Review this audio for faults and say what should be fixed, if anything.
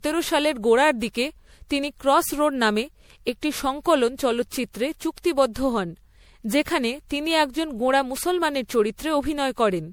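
Generation loss runs through the whole speech clip: a swirling, hollow smear with blurred consonant attacks, worse than one MP3 pass at 96 kbit/s would give, likely from about seven re-encodes whose shifting frame grids stacked up quantisation noise and spectral holes. Keep a lossless master and encode to MP3 only once, at the final step.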